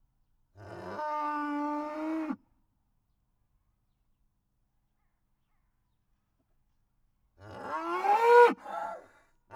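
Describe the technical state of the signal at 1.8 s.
At 1.8 s the signal is intact, with no dropout, clipping, glitch or other fault to be heard at that moment.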